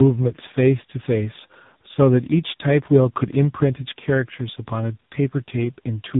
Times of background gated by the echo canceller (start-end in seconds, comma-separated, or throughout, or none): none